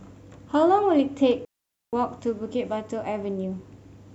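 A speech clip with a digital wireless dropout from 1.45 to 1.93 s: the audio disappears into a clean hole of near silence lasting about 480 ms, then resumes. The cut in and out is a very short fade rather than a hard click, and there is no burst of noise on either side. That behaviour points to a digital wireless link losing too much data, with the receiver muting its output until the signal recovers.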